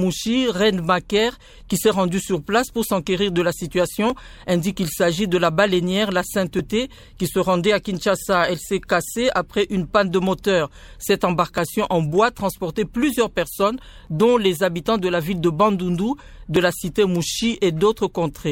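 There are tiny skips at 4.10, 11.58, 14.07 and 16.56 s, each losing just a few milliseconds with the two sides butted straight together. Their 2.5-second spacing suggests audio missing between chunks, likely from a processor dropping a sliver at each block handover.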